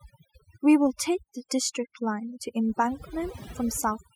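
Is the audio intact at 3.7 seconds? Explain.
No. At 3.7 seconds, as throughout the clip, the speech carries overdone noise removal. A noise reduction stage set far too aggressively pulls individual frequency bands down, or switches them off, whenever their level sits close to its noise estimate, and the softer components of the speech get caught along with the noise. The result is a background that drops and breaks up into sparkling, twinkling specks.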